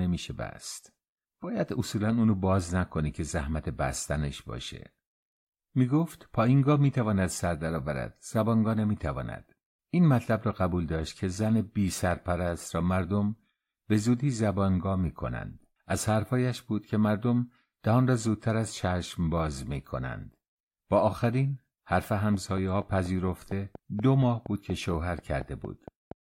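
From 22.34 s to 26.13 s a train of clicks ticks through the speech at a regular 4.2 per second, about fifteen in all, peaking a few decibels above the signal, likely from electrical interference. The waveform shows evenly spaced spikes, the spectrogram thin vertical lines.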